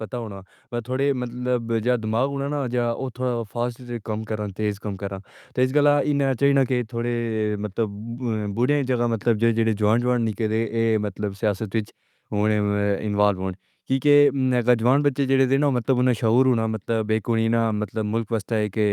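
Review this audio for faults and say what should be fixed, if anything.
From 0.09 to 5.35 s, automatic gain rising: the AGC, finding input too quiet, lifts everything about 7 dB, background included, unlike a talker getting louder. Setting a fixed, adequate input gain before recording, or disabling the AGC, would prevent it.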